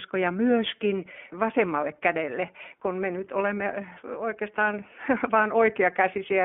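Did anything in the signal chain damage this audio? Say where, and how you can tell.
Yes. The iLBC codec, throughout, at the codec stage: the speech is confined to 200 Hz to 3.4 kHz and sounds rough and synthetic, because each 20 ms frame is coded on its own.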